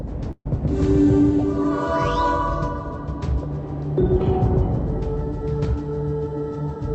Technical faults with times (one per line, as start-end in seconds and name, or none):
0.31-0.47 burst of packet loss